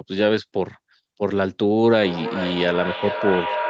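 At 1.92 s a feedback howl begins and runs to the end of the clip. Sound from a loudspeaker is reaching a microphone on the same call and looping back louder each trip. The repeats build rather than fade, narrowing to a tone near 1 kHz. The loop's delay is roughly 0.4 s. At its peak it sits about 4 dB below the speech. Nothing mutes it, so it never stops. The sound above 8 kHz is cut throughout, as a wideband call codec does.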